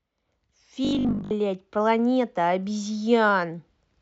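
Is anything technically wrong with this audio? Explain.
Yes. From 0.85 to 1.35 s the speech collapses into a rigid, metallic buzz at 50 Hz that only loosely tracks the words: robotic sound from repeated short buffers. The likely cause is new audio arriving too late, so playback fills the gaps by looping the last short chunk while the real signal is dropped. Here most of the stretch is repeated material, and the 50 Hz period fits a chunk of about 20 ms.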